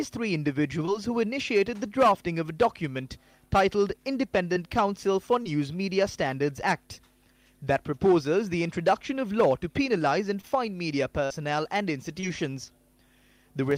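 Five spots of short concealed packet loss turn up across the audio, at 0.85–0.89, 4.53–4.57, 5.43–5.47, 10.41–10.45 and 12.20–12.24 s. At each one, about 20 ms of the stream never arrived in time, and the receiver papered over it by carrying the preceding sound forward for roughly 17 to 21 ms before crossfading back into the real signal. What you hear is a quick smear or tiny wobble rather than a clean dropout. There's also one burst of packet loss at 11.25–11.32 s, where about 60 ms went missing in a row. The concealment stretched the last sound for around 53 ms while letting it fade, so you get a held buzz or trailing hiss. Then the audio picks up further along, with that stretch simply gone.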